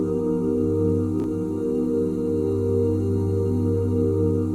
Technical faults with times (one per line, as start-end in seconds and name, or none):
1.20-1.24 chunks out of order